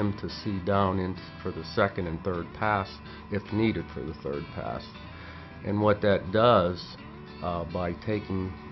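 Nothing in this one stands out as a technical problem; it's simply the sound as recorded, with nothing to flag at any point.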